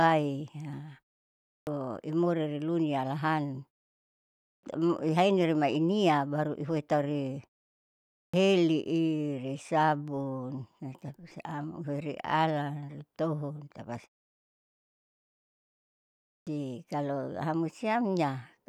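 At 1.38, 4.33, 8.05 and 16.16 s, speech resumes with a clipped start after a pause. The output device sleeps during each silence. It wakes too late. About 0.29 to 0.31 s is lost, so words begin abruptly, missing their first sounds.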